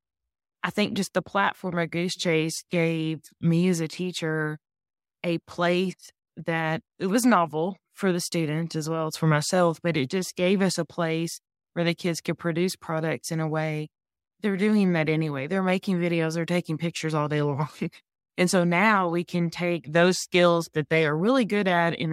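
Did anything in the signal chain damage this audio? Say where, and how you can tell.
No, nothing along the chain seems to have harmed this speech recording; I can't hear a spot where any stage let it down.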